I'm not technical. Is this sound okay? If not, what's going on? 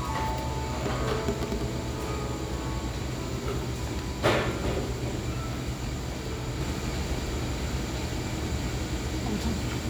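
No. From 6.61 s on, an equally loud copy repeats everything about a second later: a doubled audio track, likely from a slower capture path.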